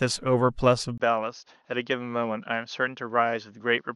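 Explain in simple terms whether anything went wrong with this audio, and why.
Input switched to a poorer device at 0.98 s: after a brief gap, the speech turns duller and quieter, with nothing above 6.6 kHz, likely a changed microphone.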